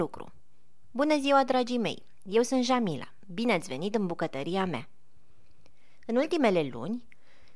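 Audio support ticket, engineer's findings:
No technical faults found on listening; the speech signal holds steady throughout, with no audible disturbance to level, timing or continuity at any point.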